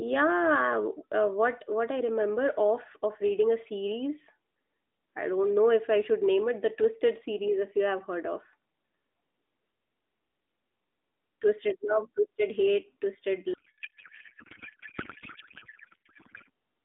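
From 13.54 s to 16.50 s the speech gives way to garbled noise and warble that barely follows it, replacing the narrowband 200 Hz to 3.6 kHz mobile sound heard earlier. This is a codec payload misread. The AMR frames were packed octet-aligned but unpacked as bandwidth-efficient, so every field sits at the wrong bit offset. The decoder builds valid-looking frames from misplaced parameters, and the result holds until 16.50 s, shortly before the clip ends.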